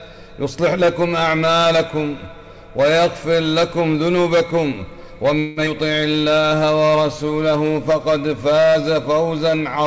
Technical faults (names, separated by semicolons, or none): call audio freeze; skip ahead; jitter buffer slow-down